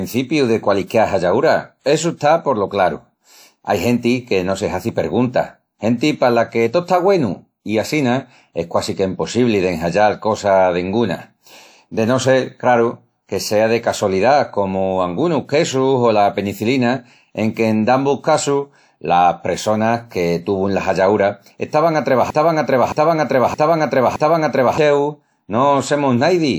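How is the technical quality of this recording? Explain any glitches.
Two faults stand out in this speech recording. At 0.87 to 0.90 s there is pre-echo. A short hiss of about 32 ms comes before a sharp attack. The codec spread its block's quantisation noise into the quiet moment before the onset. The attack sounds soft and smeared.

From 22.30 to 24.78 s there is a broken-record loop. A fragment of 0.62 s repeats back to back, four times. This is likely a stall in the player, encoder or stream that kept resending its last fragment. The audio meant for that span is lost.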